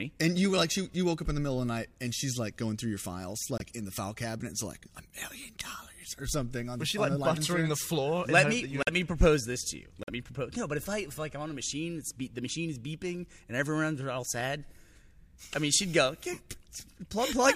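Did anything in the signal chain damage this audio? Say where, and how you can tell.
Yes. Three brief holes cut the audio dead, at 3.58 to 3.62 s, 8.82 to 8.89 s and 10.03 to 10.10 s. Each starts abruptly and lasts roughly 40 to 70 ms, which points to two or three lost frames apiece. This is a corrupt frame muted at the codec stage. Flipped bits made the decoder reject those compressed frames, and playback filled their slots with silence, so timing carries on unshifted either side of each gap.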